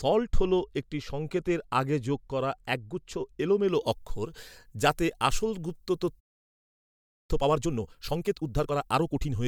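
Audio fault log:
3.69 to 9.47 s, pre-emphasis left on: From just after "আগে যোগ করা একগুচ্ছ" to the end of the clip, the treble is lifted by about 11 dB at 10 kHz relative to 1 kHz, consistent with a 50 µs FM pre-emphasis curve. The high-frequency boost applied before transmission was never undone by the matching de-emphasis cut, so the speech becomes thin and bright and its sibilants turn harsh and prominent.
6.19 to 7.31 s, playback stall: The speech cuts out mid-flow and the output stays silent for about 1.09 s before sound resumes. The likely cause is the player exhausting its buffered data or having its audio thread blocked, leaving nothing to send to the output until the supply was restored. The gap is long enough to be clearly heard as a break rather than a brief dropout.
7.31 to 9.37 s, time-compressed catch-up: Immediately after the stall the speech runs at about 1.5 times normal speed while keeping its normal pitch. 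The player is working off its accumulated backlog by cutting out short segments and cross-fading across the joins. The excised pieces make the delivery sound hurried until the pace returns to normal near the end.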